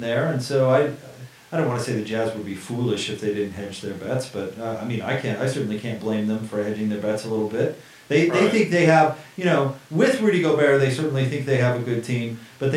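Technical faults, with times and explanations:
No technical faults can be heard in this speech recording. Nothing in the audio calls for a time or an explanation.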